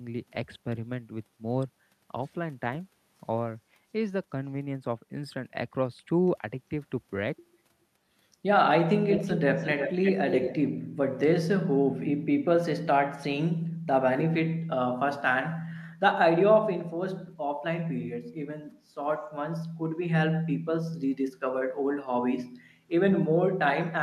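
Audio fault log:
9.13–9.38 s, 9.56–10.12 s and 10.29–10.55 s: echo leak. A distinct copy of the speech returns 341 ms late at about 5 dB below it, likely from a far-end loudspeaker whose echo canceller let it through. Unlike room reverberation, it is a separate, delayed repeat rather than a smeared tail.
13.72–13.86 s: background gated by the echo canceller. The room sound sinks by up to about 13 dB for roughly 150 ms, then returns, as the canceller clamps the microphone while the loudspeaker plays. Unlike a dropout, only the background dips and nothing goes fully silent.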